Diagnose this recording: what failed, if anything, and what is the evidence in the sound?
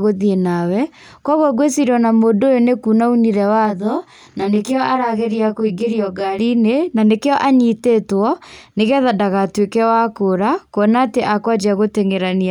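From 3.65 to 6.39 s the speech turns rough and slightly doubled, then clears. This is channel delay (comb filtering) at the driver or buffer stage. One channel arrives roughly 20 ms late, and when the pair is summed to mono the shared content cancels at evenly spaced frequencies, starting down around 20 Hz. This produces a dense comb of stationary notches across the band.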